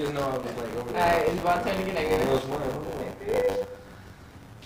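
Buffer tearing runs throughout: writer and reader cross each period, splicing in a tenth of older audio, giving a steady 100 Hz buzz, visible as regular waveform discontinuities and spectrogram striations.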